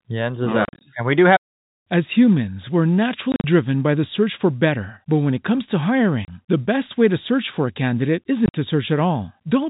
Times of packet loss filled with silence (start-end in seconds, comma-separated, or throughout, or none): 0.65-0.81, 3.32-3.44, 6.25-6.28, 8.46-8.54